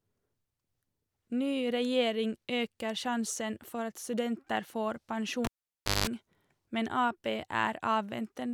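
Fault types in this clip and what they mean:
cable pulled and plugged in: a live cable was pulled and reinserted, so at 5.45 s a pop cuts speech for 0.58 s unplugged, including 186 ms of 50 Hz mains buzz while only the tip touches, and a second pop by 6.07 s.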